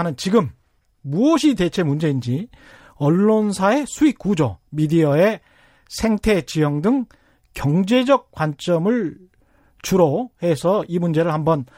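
Nothing here jumps out as a technical fault; the speech just carries on without any dropouts, glitches or other trouble catching the ear.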